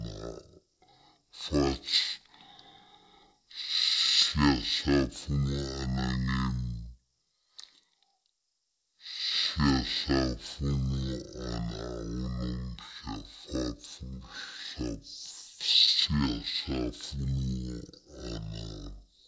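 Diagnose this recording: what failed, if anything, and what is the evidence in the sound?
The failure is at playback: a wrong sample rate. For the whole recording the speech runs at half speed and sits a full octave low, about 12 semitones down, so voices come out slow, deep and drawn out. Pitch and tempo drop together by the same factor of two, with no resampling to correct it, which fits material captured at 32 kHz being clocked out at 16 kHz.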